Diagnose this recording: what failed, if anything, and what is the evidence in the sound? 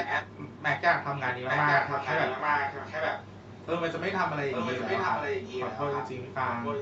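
Echo leak at the call-processing stage: a delayed copy of the speech, lagging about 0.84 s, runs from 0 to 0.81 s, 1.3 to 3.67 s, and 4.51 to 6.8 s, nearly as loud as the direct speech and somewhat quieter in the last stretch. The likely cause is a far-end loudspeaker whose echo canceller failed to subtract what its microphone picked up.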